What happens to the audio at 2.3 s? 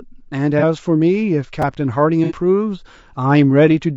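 AAC frame loss with concealment hits from 2.24 to 2.34 s. The decoder patches what sounds like a couple of missing frames from the last good spectrum, leaving a brief smeared, noisy gap. Underneath it, the speech has a rough, grainy texture with a thin top band, likely from low-delay AAC compression at a low bitrate around 32 kbps.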